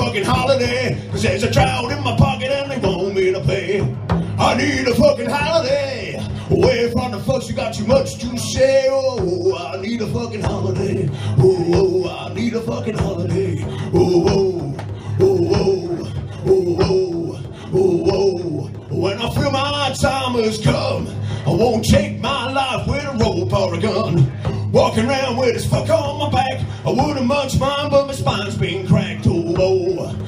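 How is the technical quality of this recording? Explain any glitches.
No glitches can be heard anywhere in the recording.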